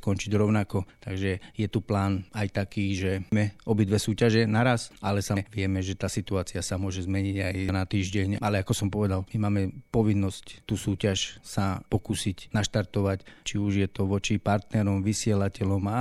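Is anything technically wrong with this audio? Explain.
Yes. The speech has damaged data in a compressed stream, heard as short glitches at 3.32 s, 5.37 s and 7.69 s. At each point, part of the encoded data is corrupt, so the decoder misreads or rejects those frames, loses sync and scans forward for the next valid frame header. This produces a brief chirp, squawk or blip in the speech before normal decoding resumes.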